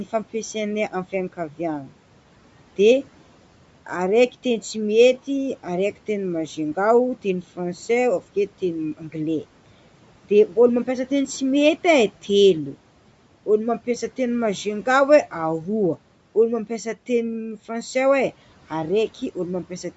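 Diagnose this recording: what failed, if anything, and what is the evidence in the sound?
The codec stage is the culprit, and it's there for the whole stretch of speech. The voice carries a breathy, grainy edge, and the top of the band stops at 8 kHz after the call microphone processing. That's likely Bluetooth LC3 compression: working in 10 ms transform frames, it discards much of the upper spectrum and fills the gaps with noise, which fits a bitrate around 48 kbps.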